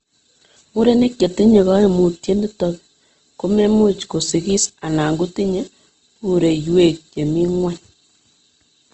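This speech clip carries audible codec damage from start to finish. Nothing is present above about 8.2 kHz, so the top end is cut off. The bands that remain sound rough and grainy, with a noisy texture where clean tone should be. This is likely Opus compression in its music mode, which keeps each band's energy but fills starved bands with noise or folded copies of lower ones. The damage fits a low bitrate near 16 kbps.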